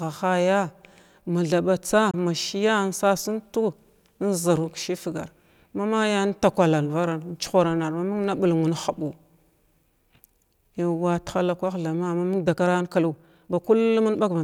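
At 2.11 s the speech cuts out abruptly, and it returns at 2.14 s. This is a Bluetooth dropout. Audio data most likely missed its delivery time and was discarded. The gap lasts about 23 ms, which fits one lost packet, and the speech resumes as though it never stopped.

From 12.3 s to the end is a time-stretched section. The pace jumps suddenly to 1.39 times normal speed while the pitch stays put. The speech sounds rushed. Short pieces were likely dropped to squeeze the audio shorter.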